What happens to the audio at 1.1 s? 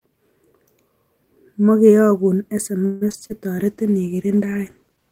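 Nothing goes wrong at 1.1 s: the speech carries on intact through that moment, with no dropout, click, distortion or other fault.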